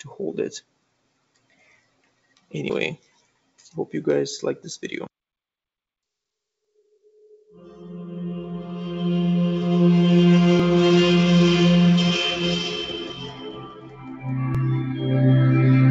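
Noise suppressor applied to music or sounds runs through the whole clip: a speech-tuned suppressor treats sustained tones, ambience and tails as noise, so the level swings by roughly 10 dB and held sound pumps and thins while attacks pass. Sound cut by the noise suppressor is heard from 0.61 to 2.53 s and 2.97 to 3.72 s, dropping by about 20 dB at worst, and again from 12.93 to 14.29 s at about 15 dB. Steady or decaying material sinks there, and tails are cut short. Audio missing between chunks appears as short skips, each roughly 50 ms, at 2.70, 6.65, 10.60 and 14.55 s. Their even 4-second spacing points to a likely cause in chunked processing that drops a sliver at each boundary and butts the two sides together. Over all of this sits a call-codec path with nothing above 8 kHz, which fits G.722 at 64 kbps.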